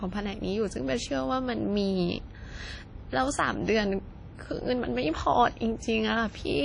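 Throughout, the speech was likely encoded with an early WMA compression setting at a bitrate that fits about 32 kbps, so long transform blocks smear quantisation noise and zero out weak detail. Nothing survives above 10.1 kHz, leaving a ringing, washy sound with hiss breathing alongside.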